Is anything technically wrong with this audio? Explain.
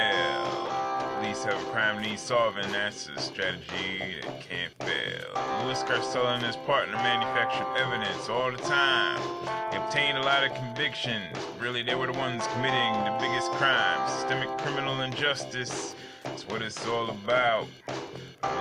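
Yes. Wi-Fi interference runs through the whole clip. A Wi-Fi radio sitting near the audio circuitry emits a beacon every 102.4 ms, and the circuit rectifies those radio bursts into the audio band. The result is a steady ticking just under ten times a second, present from start to finish and sitting roughly 40 dB below the wanted sound, so it is most audible in quieter passages.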